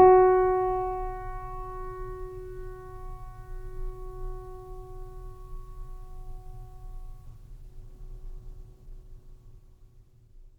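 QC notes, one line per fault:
7.27–10.59 s, call bitrate drop: the music abruptly turns watery and muffled and stays that way to the end, which fits the encoder falling from about 96 to 13 kbps. Unlike a plain low-pass filter, coarse smeared coding accompanies the lost highs, with no gaps.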